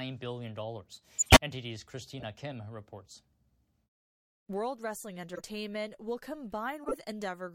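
Corrupt frame decoded at 1.17–1.37 s, 2.20–2.23 s, 5.35–5.41 s and 6.83–6.94 s. The decoder played compressed frames with flipped bits, throwing energy into the wrong frequencies as short chirps and noise bursts. The first event is the longest and loudest, spanning several frames at about -10 dBFS.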